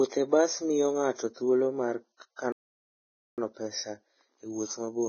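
From start to finish the speech is hissy and grainy, with heavy damage that points to Vorbis compression, likely at a very low bitrate around 15 kbps. At 2.52 s the sound cuts out in mid-flow and resumes at 3.38 s, a gap of about 0.86 s, likely a playback stall.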